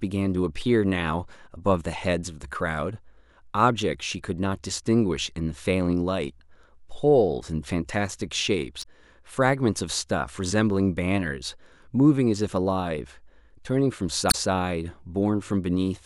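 At 8.79 s the speech breaks into a brief glitch lasting about 60 ms, to 8.85 s. This is damaged data in a compressed stream. Some bytes in the encoded file are wrong at that point. The decoder cannot read those frames properly and loses sync. It then hunts for the next valid frame header. The same fault returns at 14.28 s, a glitch of about 70 ms ending at 14.35 s.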